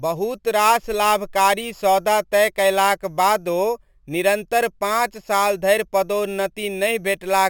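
Throughout the speech there is imaging from sample-and-hold upsampling. The rate was raised from 12 kHz to 48 kHz by repeating samples, unsmoothed. Mirrored copies sit about 16 dB down, the lowest between 6 and 12 kHz. It sounds like a bright metallic fizz.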